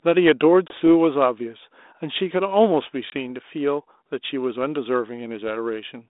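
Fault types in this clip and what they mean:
Packet loss on an ADPCM call: roughly one packet's worth, 20 ms, drops to silence twice, after which the speech returns slightly distorted until the decoder's predictor recovers.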